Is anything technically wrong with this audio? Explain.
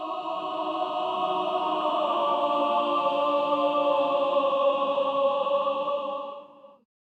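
No, the signal stays technically intact throughout, with no audible faults anywhere in the recording.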